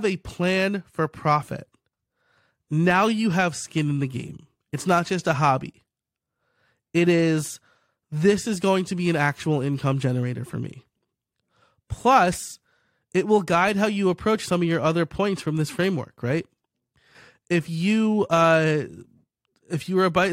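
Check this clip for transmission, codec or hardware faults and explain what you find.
No faults found in this recording.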